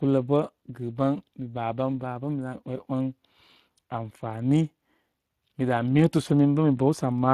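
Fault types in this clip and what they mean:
Speex codec: a CELP speech coder starved of excitation bits, leaving the speech plainly hoarse and noisy throughout, consistent with roughly 22 kbps, with nothing above 15.4 kHz.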